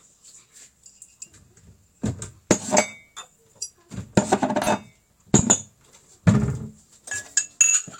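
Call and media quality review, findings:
AAC frame loss with concealment, 4.62–4.68 s and 7.66–7.75 s. Brief smeared, phasey patches. The first fits one lost frame (about 43 ms), the second two consecutive frames (about 85 ms). Decoder resynthesised from the previous spectrum. Suspect the network or transport path.

Loud pop, 5.39–5.41 s. Single sharp transient roughly 15 dB above the surrounding sound, which continues beneath it. Likely a voltage step from a connector, switch or driver glitch, shaped by the downstream circuitry. Check the analogue and device chain.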